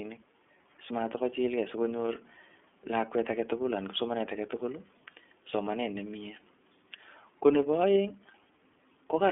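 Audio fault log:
Throughout, iLBC codec: the speech has been squeezed through a narrowband VoIP coder that rebuilds each frame's excitation on its own, with no carry-over from the previous frame. The rough, slightly synthetic grain is plainly audible and fits the 13.33 kbps mode with 30 ms frames. The sound sits in a telephone band of roughly 250 Hz to 3.4 kHz, with nothing above 3.7 kHz, so sibilants and airiness are missing and the voice sounds boxed in.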